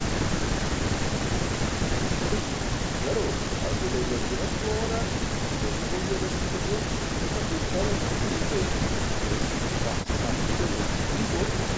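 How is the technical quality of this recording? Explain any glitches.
The main problem is right at the start: an audio dropout to silence that's already in progress when the clip opens and runs until about 2.32 s. Those first couple of seconds are dead digital silence, with no room tone at all, and then the speech just arrives. The likely cause is that the input was lost, say a device or link dropping or a mute left on, while the recorder kept writing silence. Whatever was said during that stretch is gone. After that the speech has the band-limited call sound, with nothing above 8 kHz.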